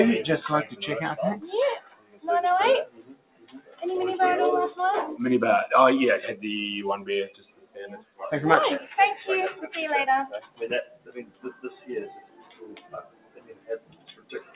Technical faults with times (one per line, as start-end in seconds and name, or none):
0.00-14.55 noise suppressor applied to music or sounds
1.79-2.24 sound cut by the noise suppressor
2.87-3.82 sound cut by the noise suppressor
7.30-8.21 sound cut by the noise suppressor
10.41-14.55 sound cut by the noise suppressor